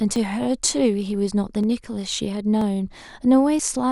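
A speech clip with periodic USB or driver dropouts: from 0.16 s to 3.59 s, a short chunk of audio vanishes every 0.49 s, roughly seven times, each loss around 10 ms. The missing audio is skipped rather than replaced with silence, so the waveform shows abrupt splice discontinuities with no flat gap. On a spectrogram these appear as thin, evenly spaced vertical broadband lines. They are heard as regular ticks within the speech, the signature of a background task stalling the bus or audio driver on a fixed cycle.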